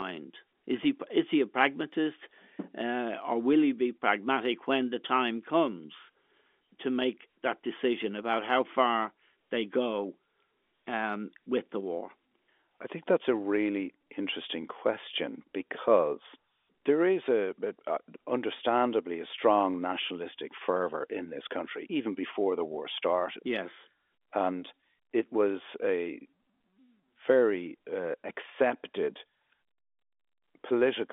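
No faults present; the speech comes through the G.711 telephone path, limited to the usual 300 Hz to 3.5 kHz line band.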